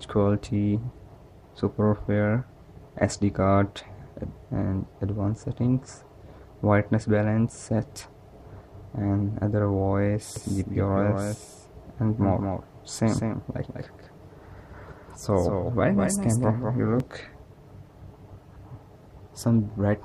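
From 10.36 s to 17.00 s there's a doubled audio track: a second, full-band copy of the sound trails the original by about a fifth of a second, sitting maybe 5 dB quieter. It's a dry, clean repeat with no decay or room colour, and it switches on and off abruptly. Most likely the same signal got captured twice, once through a slower path.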